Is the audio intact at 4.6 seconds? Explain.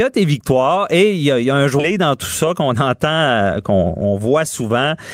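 No. At 4.6 seconds the speech is inside a jitter buffer speed-up that runs from 1.91 to 4.77 s. The receiver trims short pitch-period slices to drain excess buffered audio, so delivery runs about 9% fast at unchanged pitch and sounds hurried, with roughly 0.3 s removed overall.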